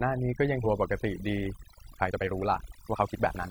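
Overdone noise removal runs through the whole clip: an aggressive noise reducer pulls individual frequency bands down or out whenever they sit close to its noise estimate, leaving a lowered background flecked with twinkling artefacts.

Damaged data in a compressed stream strikes from 0.61 to 0.67 s. Corrupted bytes in the encoded stream leave the decoder unable to read those frames, so it loses sync and hunts for the next valid header, producing a brief glitch.

A time-stretched section begins at 1.46 s and continues to the end. The pace suddenly jumps to about 1.46 times normal while pitch stays put, sounding rushed. This is likely software compressing the audio to a target length by dropping short slices to preserve pitch.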